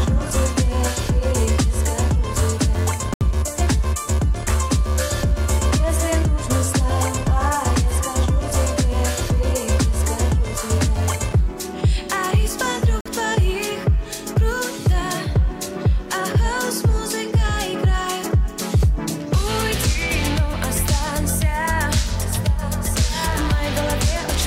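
At 3.14 s and 13.01 s the sound drops to silence for 72 ms and 47 ms, then resumes: likely a Bluetooth stall, the headphone buffer running dry during retransmission.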